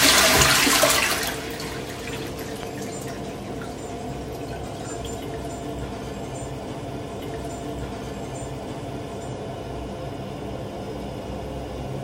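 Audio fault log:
2.63–2.65 s, loud pop: A single sharp pop lands on top of the sound, peaking roughly 10 dB above it, while the audio carries on underneath. The likely cause is a brief voltage spike, such as a plug, switch or static discharge, added to the signal and shaped by the circuitry downstream.
7.19–9.19 s, stream segment repeated: A small blip marks a jump back, after which two seconds of the audio play a second time, adding two seconds to the running time. The player fetched or queued the same stream segment twice and played both copies in sequence.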